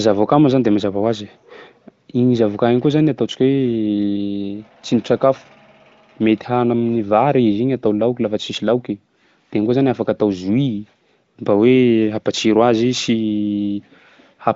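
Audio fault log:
Nothing stood out on a careful listen to this speech clip.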